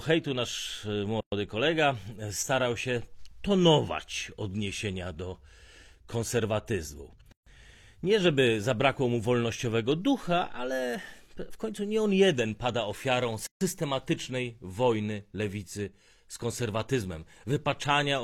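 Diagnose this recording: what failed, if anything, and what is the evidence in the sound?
Codec: six-second pieces encoded separately were joined untrimmed, leaving a gap at a join of encoded pieces, 117–144 ms gaps at 1.21, 7.32 and 13.47 s.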